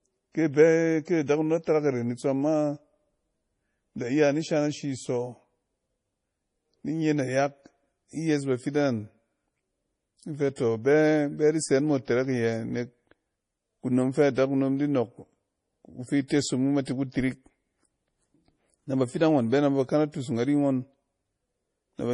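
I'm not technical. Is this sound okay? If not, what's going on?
No. The whole recording has a problem, from start to finish. It sounds like heavy MP3 compression, likely squeezed far too hard to save space. The top of the sound is missing: nothing comes through above 10.5 kHz, so it seems dull and muffled. Compression this heavy also sounds watery or swirly, with s sounds smeared and a metallic edge. The damage is steady throughout, not a single glitch.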